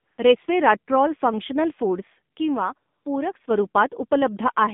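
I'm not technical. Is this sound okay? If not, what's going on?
No. The voice sounds thin, muffled and noticeably buzzy throughout, because it passed through the AMR narrowband mobile codec, a phone-call format that discards high frequencies and simplifies the voice.

From 0 to 0.18 s, and again from 2.92 to 3.06 s, the background turns into smooth, artificial hiss. That's AMR comfort noise: the phone treated those moments as silence and filled them with fake noise.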